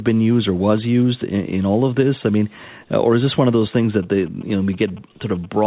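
Speech, carried over a narrowband call path with nothing above 4 kHz, is interrupted from 3.79 s to the end at 5.67 s by GSM signalling bursts. A nearby 2G phone exchanging control traffic sends short clusters of radio bursts, and the audio circuitry rectifies them into a galloping dit-dit-dit of brief 217 Hz buzzes. They sit roughly 25 dB below the speech.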